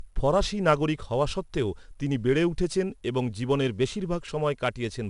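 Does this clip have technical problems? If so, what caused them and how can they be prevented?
Yes. 4-bit ADPCM compression runs throughout: each sample is coded as a coarse 4-bit step from a prediction, leaving gritty hiss that tracks loud speech and distorting sharp onsets, with nothing above 10.6 kHz, which fits about 88 kbps. Use lossless or higher-resolution encoding.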